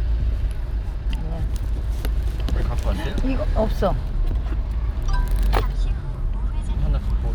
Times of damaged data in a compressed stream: none

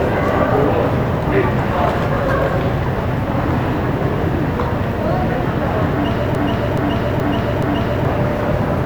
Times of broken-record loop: 6.35-8.05

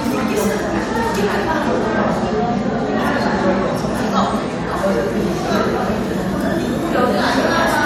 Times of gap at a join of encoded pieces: none

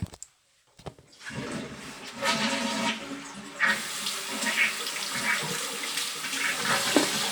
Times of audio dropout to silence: none

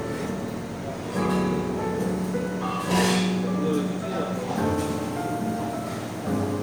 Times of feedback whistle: none

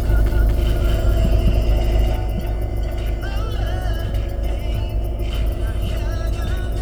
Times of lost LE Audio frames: none

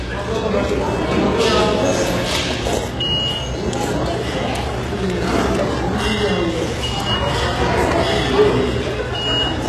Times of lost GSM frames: none

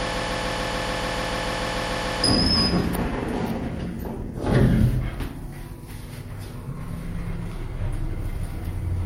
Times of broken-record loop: 0.00-2.24

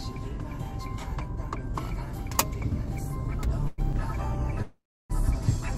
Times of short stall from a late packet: 3.92-3.95

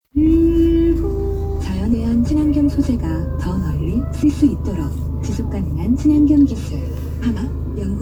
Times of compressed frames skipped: 1.92, 4.22, 5.94, 7.35

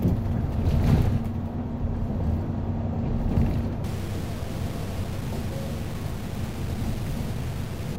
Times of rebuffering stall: none

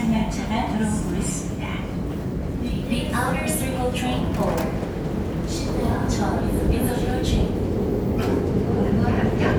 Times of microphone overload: none

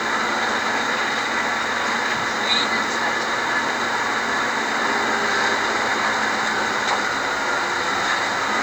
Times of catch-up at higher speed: none

